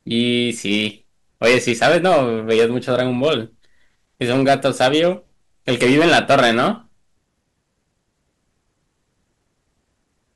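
Hard clipping breaks up this speech clip in four stretches: 0.17 to 0.87 s, 1.44 to 3.33 s, 4.22 to 5.10 s and 5.69 to 6.69 s. In each, the signal is pushed beyond what a stage in the chain can pass, so waveform peaks are sliced flat and those squared tops spray harmonics high into the spectrum. The first stretch, overdriven by about 4 dB, crackles on peaks; the others, at about 9 to 13 dB, turn loud syllables into harsh fuzz.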